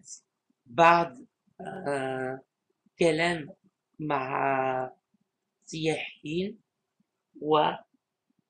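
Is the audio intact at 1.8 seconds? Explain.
No. At 1.76 s there is a single sharp click, a brief tick that shows as a thin vertical line through the spectrum. The likely cause is dropped samples: a handful of samples, around a tenth of a millisecond, go missing from the stream, so the waveform jumps straight from one value to a later one. The gap is far too short to remove any audible sound; only the abrupt step is heard.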